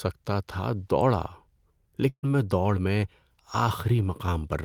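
Around 2.09 s the speech hits a burst of packet loss lasting until about 2.25 s: roughly 140 ms never arrived, so the receiver stretched the last sound into a decaying buzz or hiss for about 134 ms, then jumped ahead to "میں دوڑ میں" with that stretch gone.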